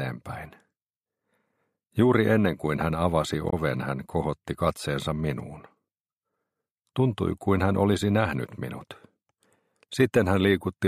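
There's one problem, and it's brief: at about 3.49 to 3.53 s the audio breaks into a short glitch lasting roughly 40 ms. That's damaged data in the compressed stream. Some of the encoded bytes there were corrupted, so the decoder couldn't make sense of those frames, lost its place in the stream, and had to hunt for the next valid frame header before it could pick up cleanly again.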